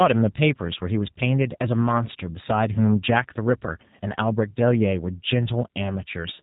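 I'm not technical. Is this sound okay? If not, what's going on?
No. The speech went through the G.729 codec, a low-data phone compression, so throughout it sounds rough and synthetic, with nothing above about 3.8 kHz.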